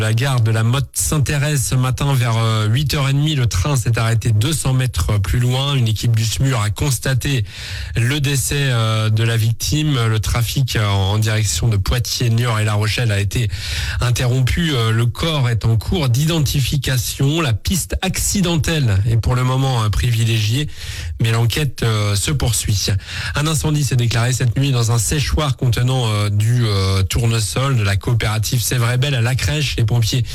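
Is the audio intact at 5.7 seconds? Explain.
No. At 5.7 seconds the audio is affected by hard clipping, which runs through the whole clip. The signal is driven about 4 dB beyond what the stage can pass, so its peaks are sliced flat, with something like 7 percent of samples pinned at the limit. The flattened tops add high harmonics, heard as a gritty crackle on louder moments. A waveform shows squared-off plateaus on the peaks, and a spectrogram shows vertical smears of energy reaching far up the spectrum at each peak.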